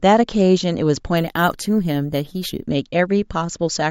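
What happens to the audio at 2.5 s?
Imaging from sample-and-hold upsampling runs from 1.17 to 2.67 s: the speech was raised from 16 kHz to 48 kHz by repeating samples without smoothing, so mirrored spectral copies, the first spanning 8 to 16 kHz at about 20 dB below the signal, add a bright metallic fizz that tracks the speech.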